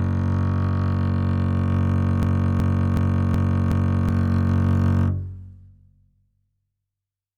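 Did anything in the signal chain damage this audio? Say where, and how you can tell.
Yes. From 2.23 to 4.09 s the music stutters: a 372 ms fragment repeats five times at about 2.7 Hz. This is a system hang loop at the driver or buffer stage. The host froze while the hardware replayed its ring buffer, which fits a 16384-sample buffer, and about two seconds of music are lost.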